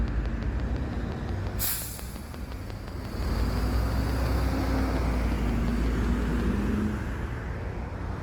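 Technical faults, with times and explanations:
throughout, Opus compression: likely a low-rate encode in music mode, fitting about 24 kbps, that fills starved bands with folded content or noise, leaving tones plainly grainy and rough.
0.08 to 6.41 s, train of clicks: likely interference injects about forty same-shaped pulses at a regular 5.7 per second, some 10 dB above the sound, ticking steadily.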